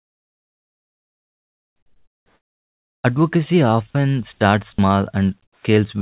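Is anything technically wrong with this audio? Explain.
Yes. There are two faults.

Comfort noise replaces the background from 0.0 to 3.04 s, 4.33 to 4.41 s and 5.43 to 5.65 s. The sender likely stopped transmitting during pauses. The background turns flat and featureless, about 9, 7 and 11 dB quieter.

An onset is clipped by the voice detector at 3.02 to 3.04 s. The detector likely reacted late, dropping the first 20 ms. The speech then begins abruptly, without its soft start.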